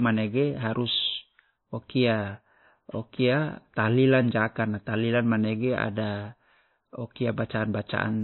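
From start to finish the speech is band-limited, with nothing above 4 kHz, and two layers of coding damage are audible together: a smeared, watery swirl typical of a very low-rate encode, with the second codec's own artefacts on top. This points to transcoding between lossy codecs, likely an MP3 near 26 kbit/s re-encoded as WMA near 96 kbit/s. The higher second rate cannot restore the lost top end and spends its bits re-coding the earlier artefacts.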